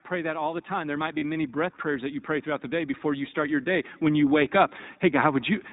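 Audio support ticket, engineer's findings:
iLBC codec, throughout. Narrowband, nothing above 4 kHz; plainly audible roughness, slightly synthetic texture. Each 20 ms frame's excitation coded independently, consistent with a 15.2 kbps mode. Probable component: VoIP codec stage.

Automatic gain rising, 0.08 to 5.5 s. Level swells gradually by about 11 dB, background lifting along with the speech. AGC judged input too quiet and kept raising gain across the whole span. Probable component: capture-side gain control.

Lost iLBC frames, 1.18 to 1.23 s. 40 ms gap filled by a held, faintly buzzy vowel-like tone, suggesting two frames dropped. Decoder concealment repeated the last pitch cycle mixed with noise; speech recovers immediately afterwards since frames stand alone. Probable component: network path.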